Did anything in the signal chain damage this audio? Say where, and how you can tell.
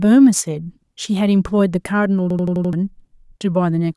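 Yes. A system hang loop at the driver buffer stage, 2.30–2.73 s: one 85 ms slice stutters five times at 11.7 Hz, consistent with a frozen driver replaying a 2048-sample ring buffer.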